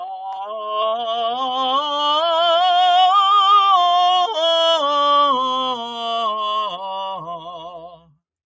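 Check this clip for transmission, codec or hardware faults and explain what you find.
The music here has been through a call's processing chain, and its speech noise suppressor is the fault. The bandwidth ends at 8 kHz, as expected from the call microphone path.

Noise suppressor applied to music or sounds, throughout. A suppressor built for speech keeps judging the steady parts of the music, sustained tones, ambience and reverberant tails, to be background noise and pulls them down, while sharp attacks get through. The gain keeps shifting by around 5 dB, so held material pumps and flutters and sounds thinner than it should.

Sound cut by the noise suppressor, 0.02 to 0.45 s and 7.17 to 8.18 s. In these stretches the suppressor clamped harder on material it treated as noise. The first dip, lasting under half a second, drops the sound by up to about 6 dB, a sag at the start. The second, roughly a second long, goes as deep as about 19 dB.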